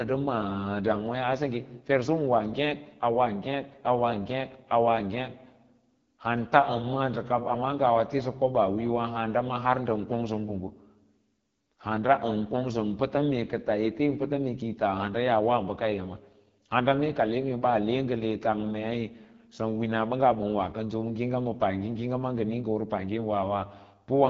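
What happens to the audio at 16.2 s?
At 16.2 s the speech carries the AMR wideband (HD Voice) codec damage present throughout. The model-driven coding turns it rough and raspy, consistent with a low mode near 8.85 kbit/s, and nothing is heard above about 7.3 kHz, while from 6.4 to 7 kHz noise fill stands in for real detail.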